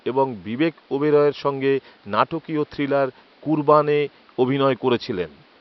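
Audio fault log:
No technical faults are present in the speech signal, and the room noise sits about 34 dB beneath the speech, where it belongs to the recording space rather than the system.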